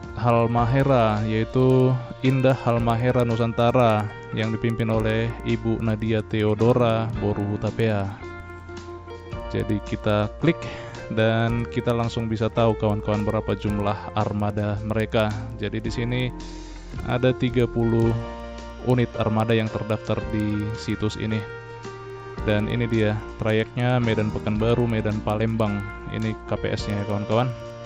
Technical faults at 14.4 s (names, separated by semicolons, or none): resampler restarted on every block